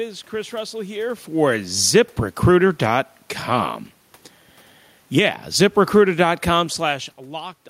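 Between 5.03 and 7.16 s speech and background sink together by about 3 dB, automatic gain falling after the control judged the input too loud or its background noise too strong.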